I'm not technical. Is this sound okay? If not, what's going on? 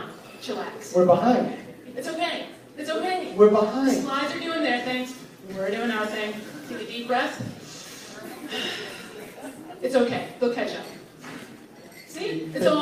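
Yes, this sound is okay. Nothing in it points to a technical problem.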